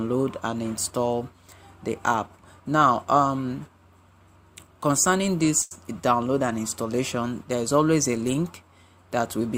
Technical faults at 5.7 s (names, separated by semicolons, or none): short stall from a late packet